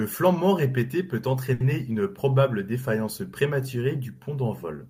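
At 1.53 to 1.74 s, after "flambement répété peut", a short stall from a late packet holds the sound about 70 ms with a slight buzz or dip, then resumes at "une probable défaillance prématurée". The spectrogram shows repeated, smeared frames; the waveform shows a looped stretch, nothing lost.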